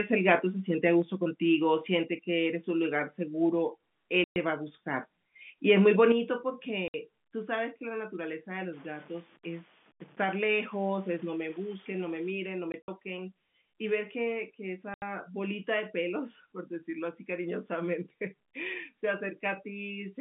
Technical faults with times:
0.29-0.34 microphone overload
1.02 microphone volume stepped down
2.04 microphone volume stepped down
4.24-4.36 packet loss filled with silence
5.69-6.04 microphone overload
6.12 microphone volume stepped down
6.88-6.94 packet loss filled with silence
8.73-12.30 low bit depth without dither
12.72-12.88 packet loss filled with silence
14.94-15.02 packet loss filled with silence

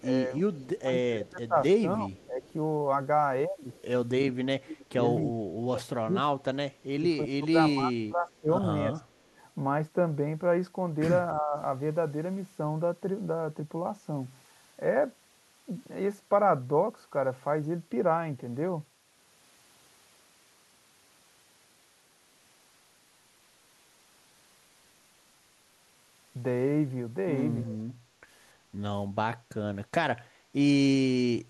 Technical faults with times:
0.00-1.25 echo leak
0.05-2.45 speech suppressed in double talk
2.25-2.52 echo leak
3.73-3.82 echo leak
4.35-8.96 speech suppressed in double talk
9.17-9.27 echo leak
11.35-11.56 speech suppressed in double talk
31.42-31.50 background gated by the echo canceller

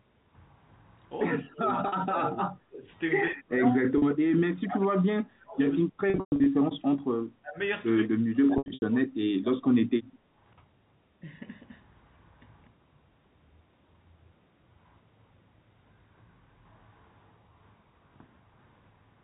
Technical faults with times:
1.42-2.88 speech suppressed in double talk
1.88-1.92 packet loss with pitch repetition
3.30-7.59 speech suppressed in double talk
3.98-4.02 packet loss with pitch repetition
6.10-6.46 packet loss with pitch repetition
8.08-10.20 speech suppressed in double talk
8.58-8.82 packet loss with pitch repetition

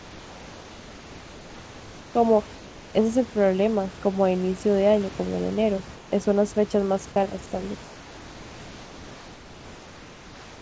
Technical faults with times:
0.00-2.14 comfort noise in place of the background
2.56-2.94 comfort noise in place of the background
5.96-6.12 comfort noise in place of the background
7.84-10.62 comfort noise in place of the background

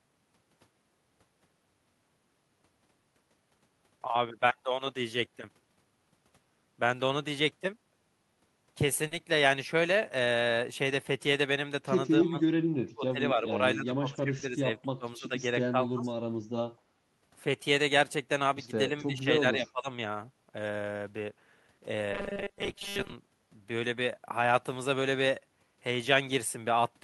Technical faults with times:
4.47-4.51 short concealed packet loss
9.07-9.13 short concealed packet loss
12.23-16.11 speech suppressed in double talk
14.39-14.43 short concealed packet loss
18.90-19.88 speech suppressed in double talk
22.13-23.14 robotic sound from repeated short buffers

